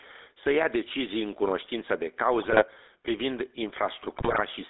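Throughout, the speech is carried by the GSM full-rate codec, which rebuilds the voice from a vocal-tract model driven by sparse regular pulses, consistent with 13 kbps coding. This gives a plainly audible buzzy, gravelly roughness confined to roughly 300 Hz to 3.7 kHz.

Also throughout, gain pumping is present. A fast limiter or compressor, likely reacting to input gain set far too high, clamps down on each loud sound, so the gain swings by about 5 dB and loud and soft parts end up closer in level.

From 2.42 to 2.63 s, GSM bit errors, at a rate of about 1.3%, corrupt the decoder's filter, pitch and gain values, and the voice breaks into squawks, pops and gargling.

From 4.10 to 4.41 s, a longer burst of GSM bit errors, with about 2.7% of bits flipped, distorts the spectrum and level frame by frame, producing further garbled squawks and pops.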